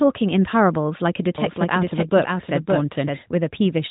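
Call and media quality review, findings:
Doubled audio track, 1.38–3.18 s: likely a slower second capture path mixed in. Dry copy trails about half a second, roughly 5 dB down, with abrupt onset and cutoff.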